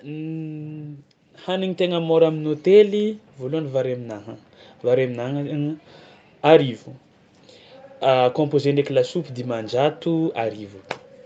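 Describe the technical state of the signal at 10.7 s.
At 10.7 s the speech is intact, carrying only the normal band limit to about 8 kHz from the call microphone processing and the WebRTC call path.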